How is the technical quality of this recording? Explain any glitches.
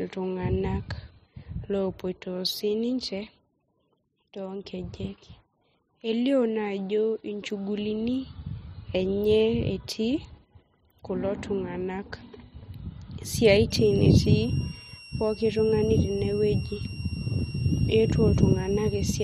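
The recording has one clear glitch in the last few seconds of the speech. From 13.70 s to the end at 19.24 s, a switching supply whistle appears. A switching power supply is running in an audible burst mode or beating with another one, producing a high whistle near 3 kHz, wandering between 2.73 and 2.83 kHz, roughly 20 dB below the speech. That drifting pitch separates it from a fixed test tone or mains hum.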